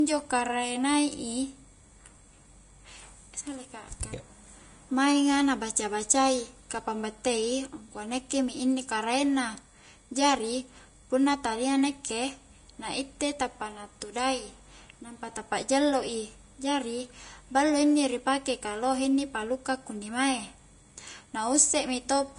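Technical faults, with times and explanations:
Throughout: Vorbis compression. The speech sounds hissy and grainy, with a dull top where nothing survives above 10.6 kHz, and consonant onsets come out smeared. This is likely a low-quality Vorbis encode, and the plainly audible damage fits a rate in the region of 34 kbps. The treble was quantised so coarsely that fine detail turned into noise. On a spectrogram, energy stops at a hard ceiling near 10.6 kHz, with speckled, noisy texture just beneath it.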